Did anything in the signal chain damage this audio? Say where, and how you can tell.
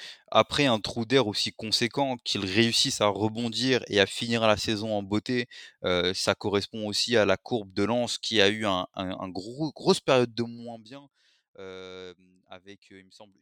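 Yes: a buffer-stage gain control applied a fade of around 20 dB in unsmoothed 1 dB jumps, about fifty a second, causing zipper noise from 10.24 to 10.94 s.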